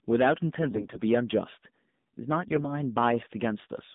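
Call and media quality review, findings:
Hard clipping throughout: harsh crackle riding loud peaks, overdriven about 8 dB into a stage whose ceiling flattens the tops. Only a small share of samples is cut, so the grit tracks level, unlike codec buzz, which persists on quiet passages too.

AMR narrowband mobile codec throughout: band limited to roughly 150 Hz–3.7 kHz, buzzy synthetic timbre, plainly audible coding damage consistent with a low AMR-NB mode around 7.4 kbps. The steady narrowband sound distinguishes it from brief, localised error bursts.

AMR bit errors at 0.62–1.01 s and 2.44–2.67 s: sudden hoarse, gargly scratchiness while pitch and level hold. Flipped weakly protected bits, at an error rate of a few percent, misplace excitation pulses across most frames in each span. Because frames are not dropped, there are no gaps or concealment repeats.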